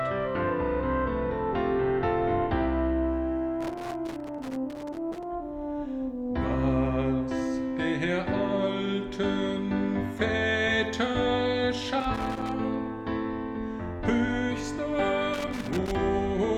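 Irregular bursts of crackle and scratching break into the sound three times: from 3.61 to 5.24 s, again from 12.00 to 12.52 s, and finally from 15.34 to 15.95 s. This is loose connector crackle. A worn or dirty contact in the signal path keeps making and losing connection as it shifts, so the audio is chopped into fragments, and any DC present on the line adds sharp pops at each break.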